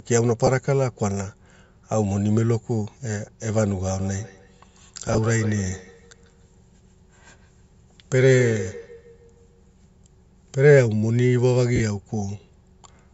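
At 0.40 s the speech breaks up briefly from lost LE Audio frames: about 20 ms of audio goes missing in short gaps spread over roughly 80 ms, which fits two 10 ms LC3 frames. The decoder fills each gap by replaying the previous spectrum with scrambled phase. The result is a brief noisy, hissy smear in place of the speech rather than a hard silence or click, and that smear is what separates it from a plain dropout.

From 3.86 s to 9.74 s there is feedback echo between two devices. A second device in the room picks up playback and sends it back, and the local echo canceller cannot remove a copy it did not play itself. Each syllable returns about 150 ms later, at about 15 dB below the speech, thinner and more ringing on each pass. The repeats land at a fixed spacing, which sets them apart from ordinary room reverberation, whose decay is smooth.

Inside that stretch, at 5.08 to 5.18 s, more LE Audio frames drop out: about 40 ms lost in runs of up to about 20 ms across roughly 100 ms, giving a longer grainy smear.

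At 11.76 to 11.80 s a final 40 ms loss produces the same noisy smearing of the speech.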